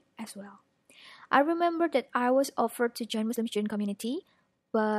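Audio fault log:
3.07 s to the end: time-stretched section. From 3.07 s the speech suddenly runs about 1.55 times faster while its pitch stays unchanged, so the pace jumps without any rise in tone. The likely cause is software compressing this stretch to fit a shorter duration, dropping short slices of the waveform to keep pitch constant. This is why the delivery sounds rushed to the end of the clip.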